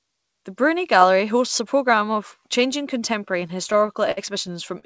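Repeated stalls (stutter) from 3.32 to 4.85 s, after "a programme of changing": late packets keep emptying the jitter buffer, stretching sound across gaps up to 55 ms, so speech drags and stutters.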